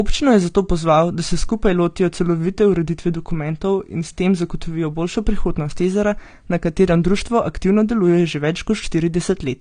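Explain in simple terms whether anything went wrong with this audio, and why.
Something went wrong earlier in the chain: the speech was most likely squeezed hard by a low-quality codec, then saved again as a large, high-quality MP3. This is low-bitrate audio saved at a high bitrate. The bigger file can't bring back what the first squeeze threw away, so throughout the whole clip there is nothing above 9.8 kHz. The speech sounds dull and muffled, lacking the crisp, airy detail a clean recording would have.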